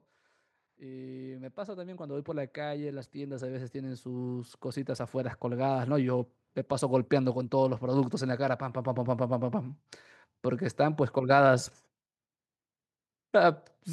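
From about 0.77 s the level starts creeping up, and it keeps climbing until around 6.99 s, ending roughly 14 dB louder. That's automatic gain rising: the AGC decided the input was too quiet and slowly wound its gain up over those six-odd seconds. Since it's boosting everything it hears, the speech and the background noise swell together, so the room seems to get louder right along with the talker.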